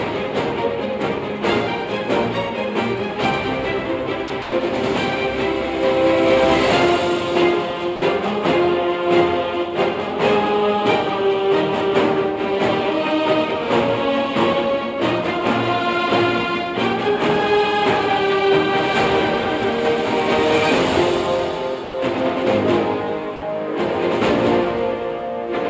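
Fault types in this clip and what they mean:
Sound dropped by the voice detector: at 4.28 s, 4.42–4.52 s, 7.96–8.02 s, 21.84–21.94 s and 23.36–23.42 s the sound gives way to soft, even noise for 20 to 100 ms. Most likely the sender's detector mistook the sound for background, stopped transmitting, and the receiver filled the gap with comfort noise.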